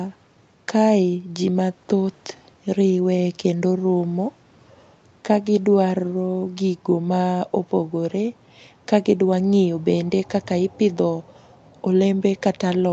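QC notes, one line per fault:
No faults heard; call processing sounds as expected.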